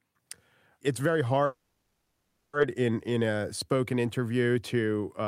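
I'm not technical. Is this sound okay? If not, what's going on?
No. From 1.45 to 2.55 seconds the speech stalls for about 1.1 seconds. The last sound is stretched into a fading buzz or hiss rather than dropping to silence, and then the speech picks up exactly where it stopped. This is a call audio freeze, likely caused by the connection briefly holding up the sound on its way. Unlike a dropout, where part of the speech is cut away, nothing is lost here. The speech simply arrives late.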